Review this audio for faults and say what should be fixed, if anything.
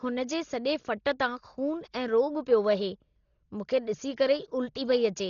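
The whole speech clip sounds dull and rough, with nothing above 7 kHz and a fluttery, noisy haze hanging around the voiced tones. That's likely Dolby Digital compression run very short of bits, around 32 kbps, where the band gets narrowed and the starved frequency lines are filled in with dither noise. To avoid it, encode at a much higher bitrate, or keep a lossless copy for anything that needs editing or re-encoding.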